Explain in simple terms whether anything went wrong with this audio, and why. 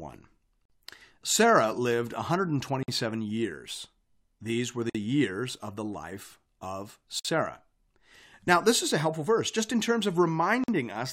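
The speech drops out into brief silences, each about 50 ms, at 0.65, 2.83, 4.90 (just before "years of the life"), 7.19 (after "of the life of") and 10.64 s (after "verse just in terms"). These are gaps at a join of encoded pieces: separately compressed sections were joined, keeping each one's silent padding.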